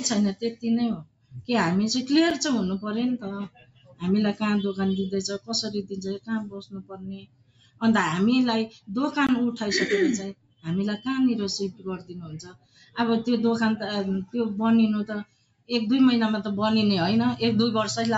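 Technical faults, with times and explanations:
Throughout: noise suppressor applied to music or sounds. A speech-tuned suppressor stays active on this audio. It treats steady tones and decaying tails as noise. Attacks pass, but sustained parts sink by around 20 dB. The level pumps and thins repeatedly.
0.34–0.64 s, 0.95–1.49 s, 3.46–4.42 s, 5.83–7.82 s, 8.67–8.90 s, 10.33–11.06 s, 11.71–12.97 s, 15.24–15.71 s: sound cut by the noise suppressor. Held or fading sound drops by about 18 to 21 dB in each span. Tails end early. The longest dip is near 5.8–7.8 s.
2.30 s and 9.27–9.29 s: block of digital silence. A block of zeros was played, which fits the output buffer not being filled in time. The audio cuts out abruptly and returns with no fade. The 6 ms gap is heard as a tick, and the 20 ms gap as a short hole.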